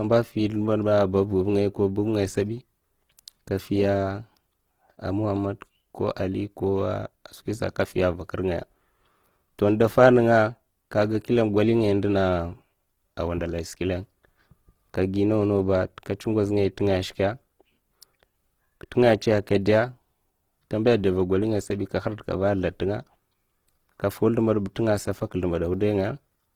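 The whole clip has a grainy, rough edge to the speech, most likely Opus compression at a low rate, around 16 kbps, with starved bands filled by noise.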